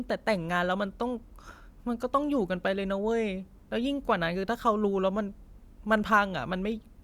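Speech clip with no audible technical faults.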